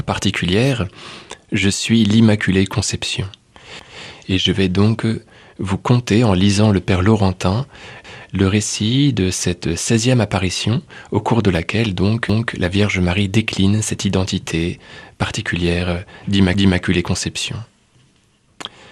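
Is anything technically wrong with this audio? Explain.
Yes. Overlapping chunks: at 3.8–4.05, 8.05–8.3, 12.3–12.55 and 16.55–16.8 s, each 4 s chunk begins 250 ms early, so that slice replays as a stutter. Unlike a dropout, nothing goes missing.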